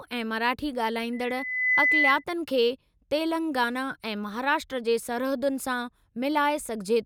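At 1.13 s, just after "ऐं मराठी", loudspeaker feedback squeal begins. A 2 kHz tone swells over roughly 0.7 s, sitting about 5 dB above the speech, until 2.24 s.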